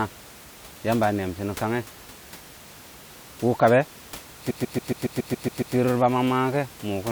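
Repeated frames from 4.49 to 5.75 s: a 139.3 ms block, which fits a run of six compressed frames, reaches the decoder again and plays nine extra times. This produces a rapid, mechanical stutter and lengthens the audio by 1.25 s.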